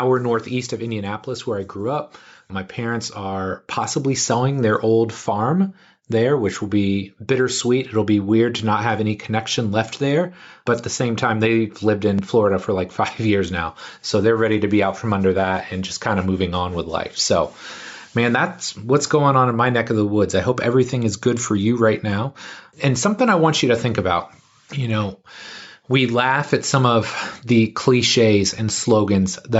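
From 1.25 s to 16.91 s, automatic gain rising lifts the level by about 9 dB as the gain control, judging the input too quiet, slowly raises its gain. Voice and background swell together, so the waveform envelope widens steadily. The spectrogram brightens evenly below its 8 kHz ceiling from the call microphone processing.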